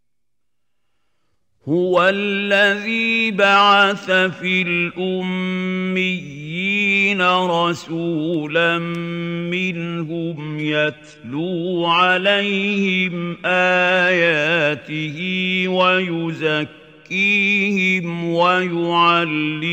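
Around 10.31 to 14.31 s the audio drops without any gap into a thinner stretch with nothing above 13.3 kHz, then snaps back. That's an adaptive stream at a lower bitrate, sounding like a move from a decent AAC rate down to something near 16 kbit/s HE-AAC while the connection sagged.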